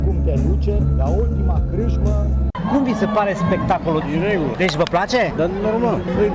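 Nothing stood out on listening to the clip.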